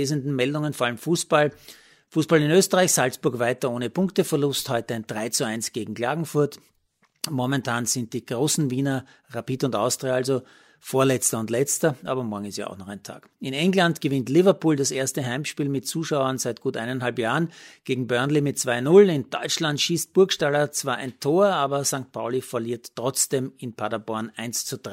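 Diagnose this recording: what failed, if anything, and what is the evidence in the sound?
Nothing in the chain has failed: the speech signal stays continuous and intact, with no audible fault at any stage from capture to playback.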